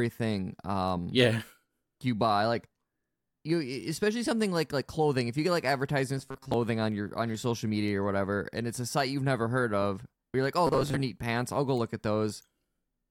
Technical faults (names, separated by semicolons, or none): robotic sound from repeated short buffers